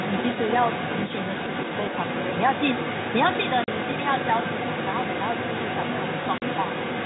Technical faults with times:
0.00-7.05 other side's voice leaking through
3.64-3.68 packet loss filled with silence
6.38-6.42 packet loss filled with silence

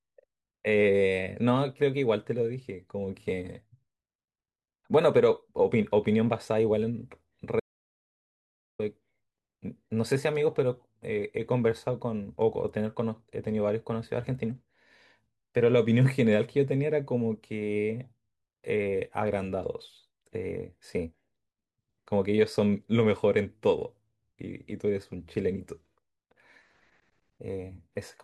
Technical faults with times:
7.60-8.79 audio dropout to silence

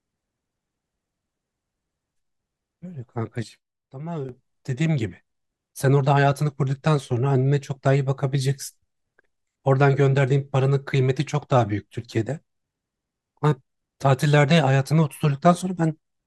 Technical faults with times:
3.43-4.29 sudden gain jump

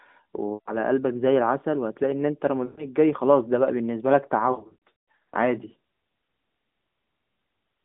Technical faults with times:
0.54-0.76 lost AMR speech frames
2.66-2.85 lost AMR speech frames
4.52-5.36 lost AMR speech frames

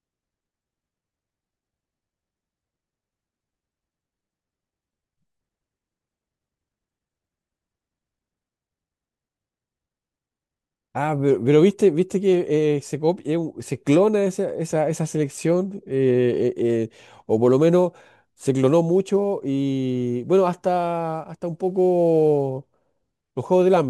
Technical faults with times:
16.62-23.90 sample clock jitter

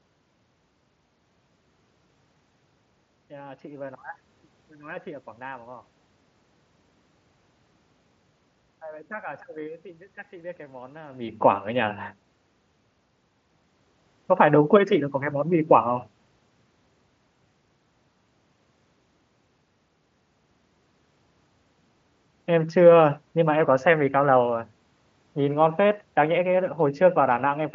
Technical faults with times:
none

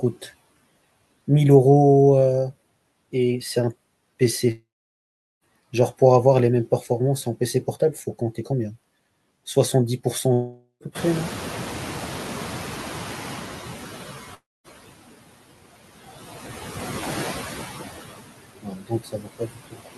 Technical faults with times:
0.00-19.98 noise suppressor artifacts
4.51-5.44 long network dropout
10.33-10.83 long network dropout
10.95-13.97 noise suppressor catching up
14.34-14.67 long network dropout
18.62-19.98 speech cut by the noise suppressor

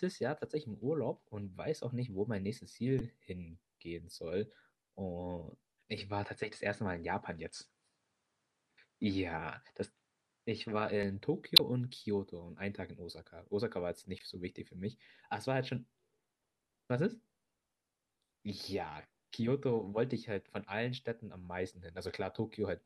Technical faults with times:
2.98-3.01 damaged data in a compressed stream
5.98-11.03 input switched to a poorer device
11.56-11.60 damaged data in a compressed stream
14.18-14.22 damaged data in a compressed stream

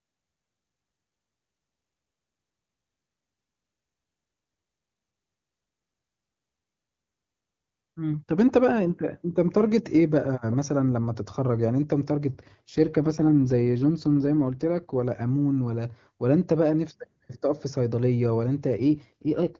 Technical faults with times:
12.34-14.94 AMR rate drop
18.73-19.60 AMR rate drop

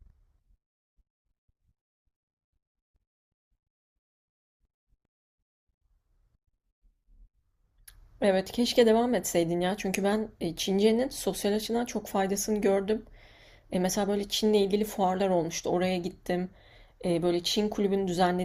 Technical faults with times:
none

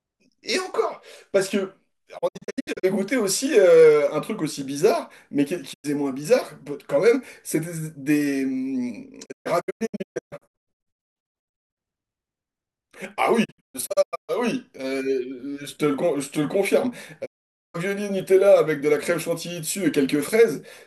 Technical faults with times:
2.17-2.85 digital broadcast dropout
5.72-5.86 digital broadcast dropout
9.24-11.78 digital broadcast dropout
13.43-14.31 digital broadcast dropout
17.24-17.76 digital broadcast dropout

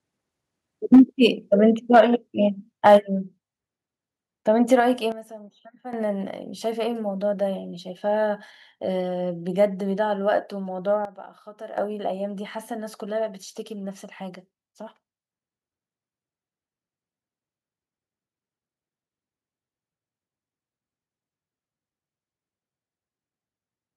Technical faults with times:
0.93-1.01 microphone overload
0.95 microphone volume stepped down
1.93-2.01 microphone overload
1.95 microphone volume stepped down
2.86-2.96 microphone overload
2.97 microphone volume stepped down
4.80 microphone volume stepped down
5.12-5.93 sudden gain jump
11.05-11.78 sudden gain jump

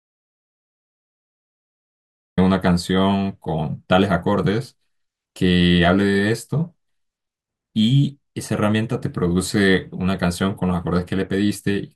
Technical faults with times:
0.00-2.38 audio dropout to silence

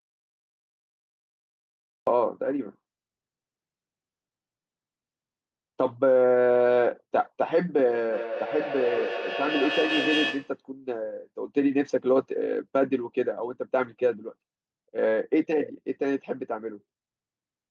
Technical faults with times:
0.00-2.07 audio dropout to silence
8.12-10.60 feedback echo between two devices

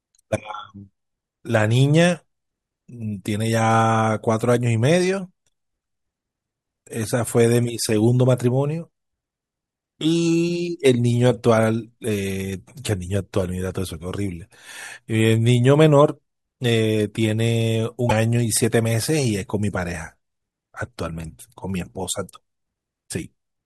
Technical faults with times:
18.06-18.11 damaged data in a compressed stream

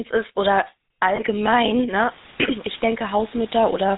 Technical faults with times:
0.00-3.98 GSM full-rate codec
1.16-1.21 lost GSM frames
2.06-3.98 low bit depth with dither
2.72-2.75 lost GSM frames

